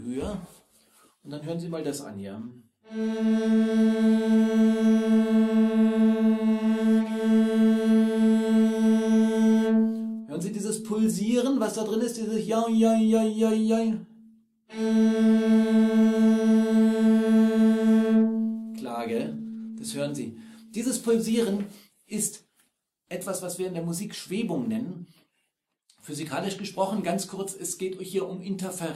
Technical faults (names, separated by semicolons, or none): block size mismatch (truncated)